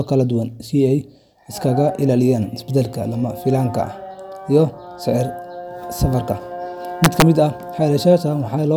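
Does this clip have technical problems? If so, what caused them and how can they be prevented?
Yes. The speech has an integer overflow between 7.04 and 7.22 s. A gain or summing stage was driven about 3 dB past the largest value its integer format can hold, and instead of being held at the limit, those samples wrapped around to the opposite extreme. Each peak that crossed the ceiling jumped across the full range, so the loudest moments in that stretch become violent cracks, far harsher than ordinary clipping. Prevention: use saturating arithmetic or a limiter before any integer conversion, and leave enough headroom that sums and gains cannot exceed full scale.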